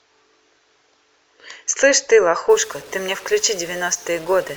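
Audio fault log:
2.50–4.57 s, stuck bit: harsh buzzy distortion and a noisy floor in pauses, likely from one converter bit stuck, adding a step of about -35 dBFS. The spectrogram shows broadband haze filling gaps, and the waveform has jagged offsets.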